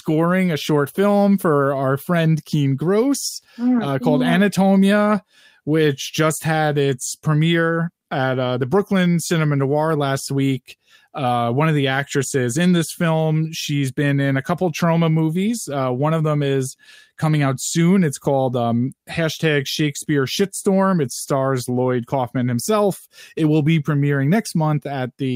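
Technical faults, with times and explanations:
Nothing stood out on listening to the recording as a technical fault.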